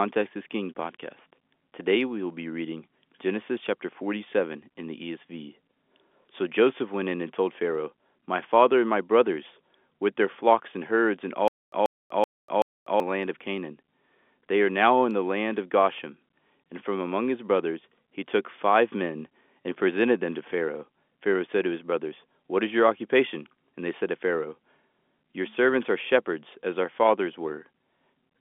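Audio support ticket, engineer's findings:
Stutter with silent gaps, 11.48–13.0 s, after "flocks and herds and". A 136 ms fragment repeats four times every 380 ms, with 245 ms digital silence between. Likely a stalled stream replaying its last buffer. The intervening audio is lost.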